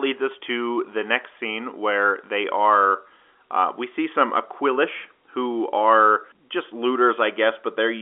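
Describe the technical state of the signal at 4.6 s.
At 4.6 s the audio is intact, with no fault at that moment, just the narrow telephone band of the G.711 line coding it passes through.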